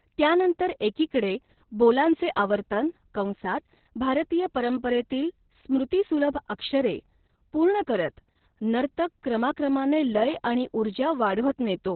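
The whole clip is speech squeezed through Opus voice compression. Everything is boxed into a narrow, phone-like band below about 4 kHz, and the voice comes out muffled, hoarse and a bit robotic. That's the SILK coder starved of bits, which fits a very low rate, around 6 kbps.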